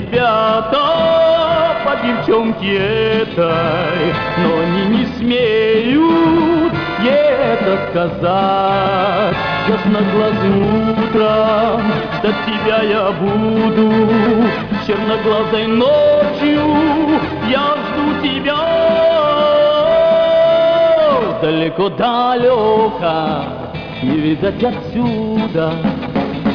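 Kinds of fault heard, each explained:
No technical faults can be heard anywhere in the audio.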